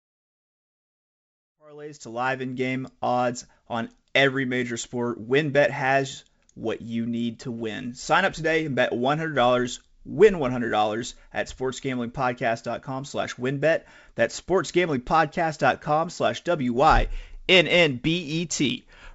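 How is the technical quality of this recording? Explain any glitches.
No glitches can be heard anywhere in this speech recording. The audio has come through a call path using the G.722 codec, so nothing sits above 8 kHz, and it rises in a smooth fade from roughly 1.5 s to 2.96 s.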